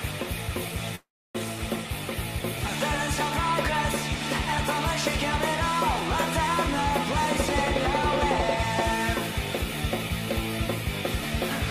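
From 0.95 to 1.37 s there is a call audio freeze: the last sound is stretched into a brief fading buzz and then about 290 ms of silence, likely because delayed packets drained the jitter buffer. Unlike a dropout, nothing is lost; the sound resumes where it stopped, roughly 0.4 s later.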